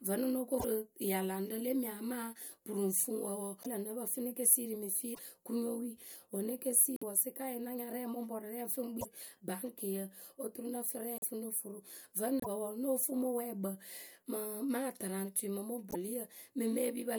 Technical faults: broken MP3 bit reservoir

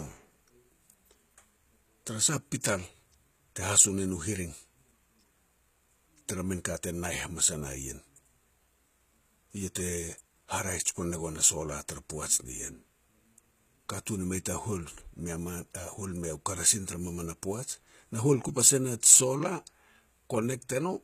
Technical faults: HE-AAC compression

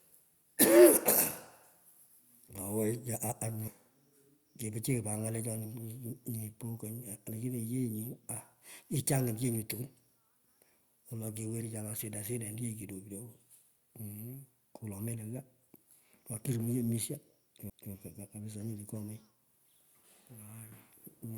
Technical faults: CD skip

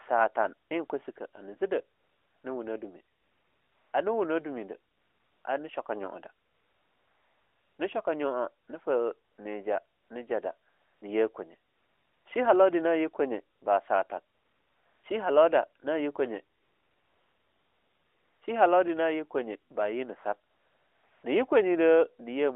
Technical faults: AMR comfort noise

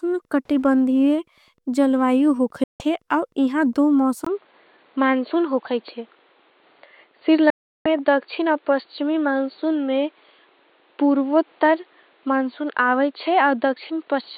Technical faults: Wi-Fi interference; digital broadcast dropout; input switched to a poorer device

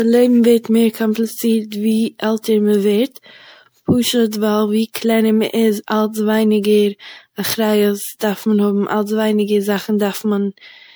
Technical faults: generation loss

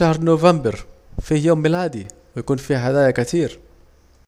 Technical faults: one channel drops out

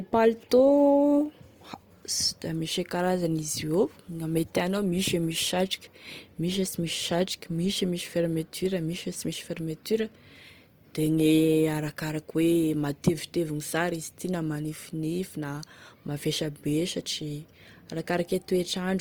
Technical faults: Opus compression

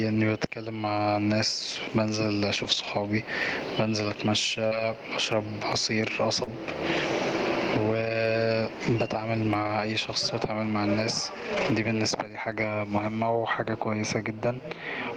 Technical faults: gain pumping; lost packet rebuilt from error correction; short concealed packet loss

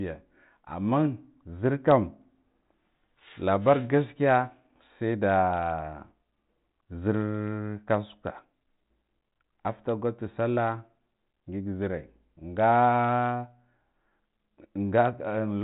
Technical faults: none

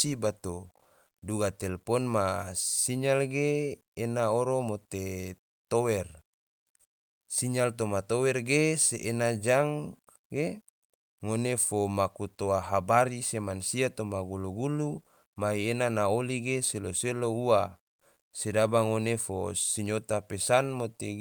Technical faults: low bit depth without dither

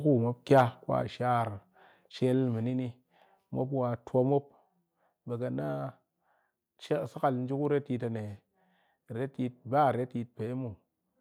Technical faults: microphone overload; microphone volume stepped down

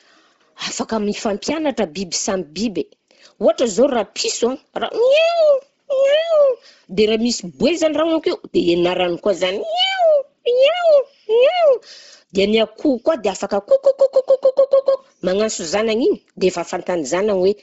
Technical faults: Bluetooth LC3 compression

